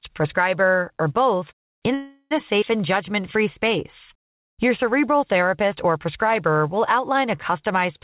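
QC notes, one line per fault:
1.94–2.33 s, call audio freeze: right after "prescriber or both in" the sound smears into a fading buzz with a brief silence, likely packets held up draining the jitter buffer; about 0.37 s is inserted and nothing lost, unlike a skip.
2.61–2.64 s, skip ahead: just after "or both in a" roughly a tenth of a second of audio vanishes and the two sides butt together almost seamlessly, a jump forward rather than a pause.
4.13–5.44 s, jitter buffer slow-down: leading into "or prescriber" the audio runs about 95% speed at unchanged pitch, repeated pitch periods adding 74 ms and stretching sounds, unlike a freeze's hold-and-fade.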